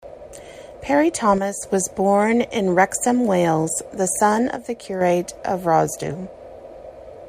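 From 1.38 to 1.63 s, just before "was born in", and again from 4.56 to 5.01 s, after "the son", the speech abruptly falls by about 6 dB and then recovers. The likely cause is one channel dropping out, halving the mono sum.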